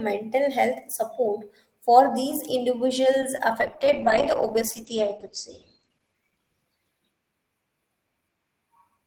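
Short concealed packet loss at 3.36 to 3.40 s: 20 ms of speech arrived too late, so the decoder extended the preceding sound and blended back, leaving a brief smear.

Call bitrate drop from 3.62 to 7.46 s: the encoder fell from 32 to 11 kbps, staying lowest for 1.78 s. The audio turns rough and muffled as the bandwidth narrows from 20 kHz to 8 kHz.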